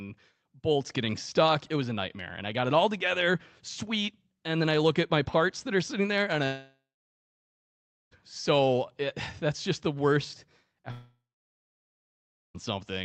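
Right after "are sitting there and", at 6.45 s, the audio cuts out until 8.13 s, and it happens again after "that's just the worst", from 10.91 to 12.56 s. Each gap sounds like a long network dropout, likely packets not arriving. The receiver briefly smears the last sound into a fading buzz or hiss, then sits silent for about 1.3 to 1.4 s before the speech resumes with the missing stretch simply gone. Throughout, the sound is band-limited to around 8 kHz, as you'd expect from the Opus call path.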